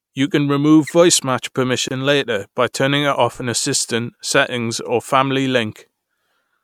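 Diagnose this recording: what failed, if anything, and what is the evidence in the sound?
The failure is at the codec stage: a gap at a join of encoded pieces. At 1.88 s, right after "can remove voice match", the speech drops into a 25.5 ms silence with smeared edges, then resumes at "later by turning" exactly where it stopped. The segments were encoded separately and concatenated untrimmed, so the encoder's start-up delay and last-frame padding remained as dead air at the splice.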